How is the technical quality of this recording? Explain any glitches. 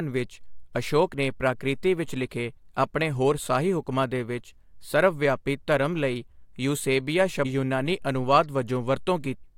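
Two brief glitches stand out in the speech, both from damaged data in a compressed stream. The first is at 7.44 s. The second runs from 9.43 to 9.45 s. Corrupted bytes made the decoder misread those frames and lose sync. It then hunted for the next valid frame header. Each break comes out as a short chirp or blip.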